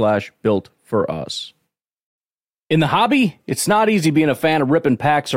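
No audible technical faults.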